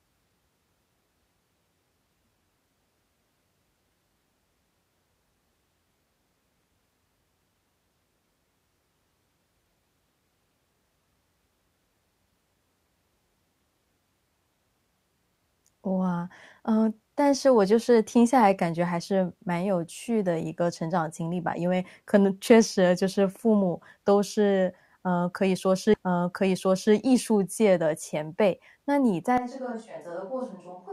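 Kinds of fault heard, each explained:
Stream segment repeated: at 25.93 s the player plays the same one-second segment a second time, so the preceding second of speech is heard again after a small blip at the jump back, adding 1.0 s to the programme.
Switch to a distant microphone: from 29.38 s to the end the speech suddenly turns roomy and hollow, thinner in the bass and about 10 dB quieter, with background noise rising to roughly 35 dB below the speech, likely because the close microphone's signal dropped out.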